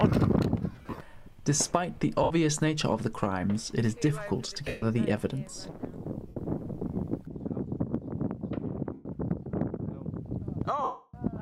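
Lost LE Audio frames at 0.72–0.98, 2.23, 4.68, 6.28, 8.93 and 10.83–11.14 s turn tones into a noisy smear rather than silent gaps, dying away gradually during the longest, 300 ms loss.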